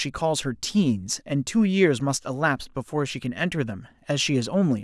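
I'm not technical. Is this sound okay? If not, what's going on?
Yes, this sound is okay; nothing is going wrong in it.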